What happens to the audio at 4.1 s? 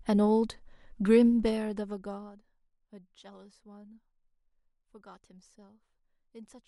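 Nothing goes wrong at 4.1 s: the speech runs on intact, with no dropout, distortion or abrupt jump in level at that point.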